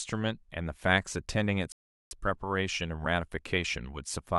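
At 1.72 s the speech halts and falls to silence until 2.11 s. That is a rebuffering stall: the player used up its downloaded audio and waited for more, adding 390 ms of dead air. The speech then picks up at exactly the syllable where it stopped. That seamless resumption is what separates it from a dropout or packet loss, where a piece of the audio would be missing and the sound would jump ahead.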